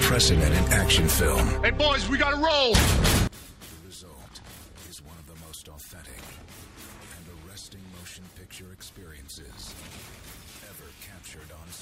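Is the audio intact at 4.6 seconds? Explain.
No, two things are going on there. From 3.27 s to the end, the sound drops by about 24 dB and turns faint. That's likely one channel inverted: one stereo channel has flipped polarity, so whatever both channels share cancels when they're summed to mono.

Right at 4.57 to 4.59 s there's also a quick stutter from overlapping chunks. About 21 ms of audio plays twice because the next chunk starts before the previous one finished. That fits chunks of about 2.5 s, with a small, audible repeat at the join.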